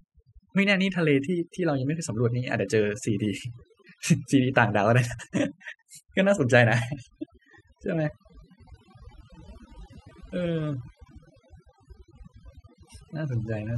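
From start to finish you get overdone noise removal: the denoiser was pushed too hard and clamps down on any band close to its noise estimate. The background collapses to near-silence with twinkly specks, and quieter voice detail gets eaten.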